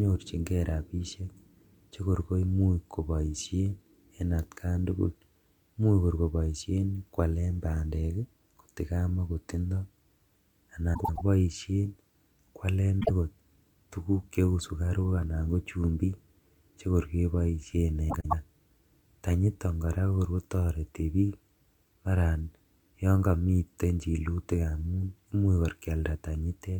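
Frames out of order break this speech three times. At 10.94 s, two neighbouring runs of about 104.5 ms swap places, so the stretch to 11.21 s plays with its halves exchanged. At 13.00 s, two single blocks of about 26.1 ms trade positions. After "chekor keboishen", at 18.10 s, another pair of 104.5 ms runs swaps until 18.33 s. Each swap gives a garbled flutter. No time is lost.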